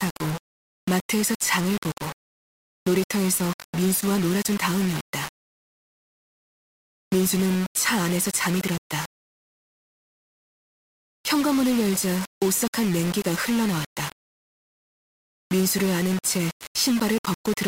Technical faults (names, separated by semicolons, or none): low bit depth without dither